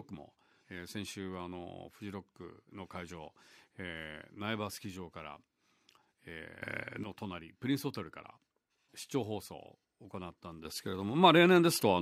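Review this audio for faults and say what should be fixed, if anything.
Sudden gain jump at 6.62 to 7.04 s (about 12 dB) and from 10.65 s to the end (about 8 dB): the speech and background noise step up in level together, instantly. This is likely a digital gain change applied between adjacent samples without any ramp. To prevent it, smooth every gain change over a few milliseconds.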